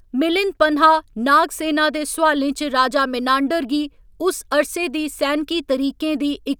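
No technical faults can be heard anywhere in this speech recording. Nothing in the signal chain draws attention to itself at any moment.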